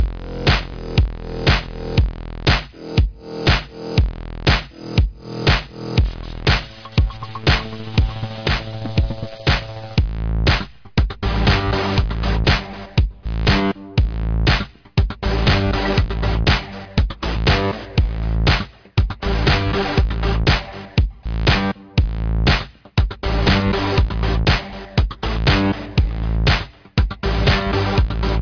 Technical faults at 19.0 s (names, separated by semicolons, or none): none